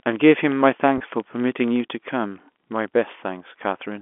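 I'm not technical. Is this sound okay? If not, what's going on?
No. Two faults can be heard in this speech recording.

The first runs through the whole clip. It is a filter restarted on every block. A filter in the chain loses its memory every twenty-fifth of a second and starts again. Each restart adds a tiny tick. Those ticks blend into a buzz at 25 per second. It gets louder when the speech gets louder.

The second is brief. It is packet loss with pitch repetition, from 0.98 to 1.00 s. About 20 ms of sound went missing. The system filled the gap by repeating the last bit of voice. You hear a quick, slightly buzzy stretch there.

The recording also has the narrow, boxy sound of a phone line, since it went through ordinary telephone coding.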